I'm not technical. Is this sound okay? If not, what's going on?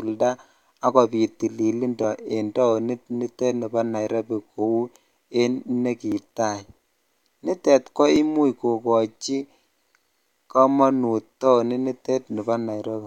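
No. Starting just after "ak kobiiit tililindo", at 2.04 s, there's a click about every 2.04 s, roughly seven times, ending near 12.25 s. This is most likely clock drift buffer slips: two pieces of equipment keep slightly different time, so every couple of seconds a tiny sliver of sound gets skipped or doubled. Unlike random glitches or dropouts, these clicks arrive on a steady, evenly spaced beat.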